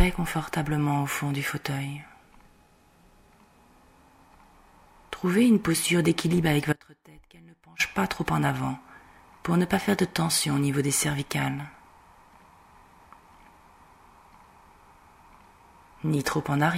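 An audio dropout to a faint residue runs from 6.73 s to 7.80 s, cutting the sound abruptly for about 1.07 s before it returns just as suddenly mid-flow. The gap is not silent. A faint leak of the sound remains, roughly 25 dB below its normal level, so the path after the break stayed live while the wanted signal was lost. The likely cause is a brief interruption upstream, such as a failing connection or a momentary loss of the feed.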